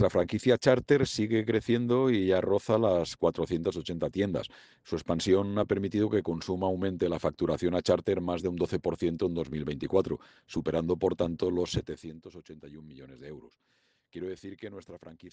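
Zipper noise, 11.66 to 12.23 s: a roughly 15 dB drop taken in about a hundred unsmoothed steps per second ticks; the waveform shows a staircase, the spectrogram thin vertical lines.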